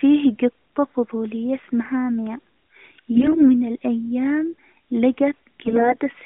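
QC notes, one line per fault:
3.14–3.53 s and 5.66–5.97 s, AMR bit errors: the sound suddenly turns hoarse, scratchy and gargly while keeping roughly its pitch and loudness. Many of the weakly protected bits in the AMR frames were corrupted. The checksum on the key bits passed, so the decoder used the frames, but with misplaced excitation pulses and wrong fine gain and spectral values. Unlike packet loss, there are no gaps or smeared repeats. The narrowband codec's band-limiting to about 200–3500 Hz and its light coding damage are present throughout.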